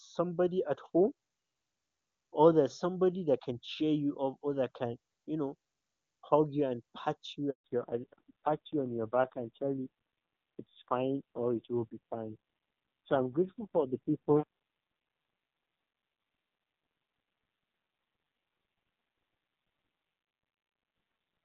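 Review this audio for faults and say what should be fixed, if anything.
A handover gap opens at 7.50 s and runs to 7.64 s, 140 ms of silence in the speech. During the network switch no speech frames reached the decoder, so the voice fades within a few tens of milliseconds and stays silent until the new link begins. Whatever was said in that window is gone. Ordinary packet loss usually leaves smeared or buzzy concealment audio in the hole; this gap is clean silence, and the sound on the far side changes character. Preventing it means keeping the call on one network where possible, or tuning handover so the new link carries frames before the old one drops.

Fallback to narrowband starts at 7.64 s and lasts to the end of the clip. Before the switch the HD Voice path sounds clear and full, consistent with AMR-WB at its top rate of about 23.85 kbit/s. Afterwards everything above 4 kHz is absent, and the voice turns dull and raspy, which fits AMR-NB at a low rate near 5.9 kbit/s. 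A simple low-pass filter or EQ would dull the sound without adding roughness, and it would not switch on abruptly right after a handover. The fix is to keep the target network's wideband codec enabled so the call can renegotiate back to HD Voice after handover.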